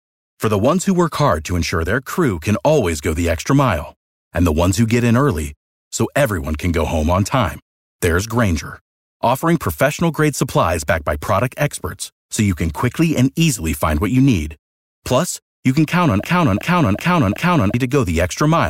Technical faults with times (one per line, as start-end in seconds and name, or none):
16.24-17.74 broken-record loop